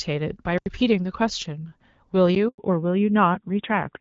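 A speech recording carried over a phone call on the AMR-WB (HD Voice) codec, with light coding damage. A block of digital silence cuts the sound from 0.58 to 0.66 s, an 80 ms hole. Another lands at 2.35 s, short enough to be heard as a tick. These point to output buffers not being filled in time. At 2.48 s the sound dies away for a 100 ms handover gap. No frames arrived while the call switched networks. From 2.58 s to the end there is a fallback to narrowband. Nothing above 4 kHz remains, and the voice turns duller and rougher, which fits a drop to AMR-NB at about 7.4 kbit/s.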